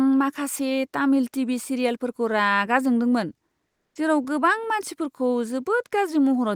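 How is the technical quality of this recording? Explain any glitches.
One glitch is present in this speech recording. From 3.67 to 3.95 s, after "टीवी सिरियेलफोरखौ रागा जादोंमोन" and before "जेराव गोबां मानसिफोरखौ", comfort noise replaces the background for 280 ms. The likely cause is discontinuous transmission, which fits Opus DTX: the sender pauses during silence and the receiver synthesises steady noise. The faint background, about 56 dB below the loud passages, turns featureless and drops about 1 dB.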